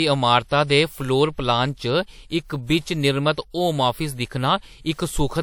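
Throughout the speech, the sound carries the artefacts of an earlier low-bitrate encode despite a high-rate MP3 container. Nothing sounds above 20.1 kHz. This is likely low-bitrate audio saved at a high bitrate. The damage fits an earlier WMA encode near 64 kbit/s. Re-encoding cannot restore what was lost.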